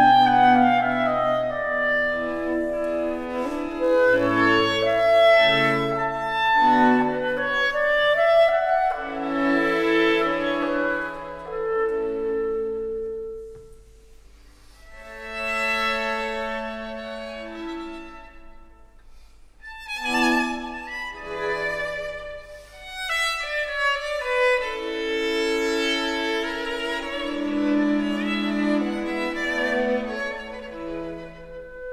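From 3.83 to 5.83 s there's computer activity noise, a buzzy chirping at roughly 70 pulses a second, sitting about 35 dB under the audio. Processor or graphics load is shifting the shared ground, so it tracks the machine's activity, not the sound.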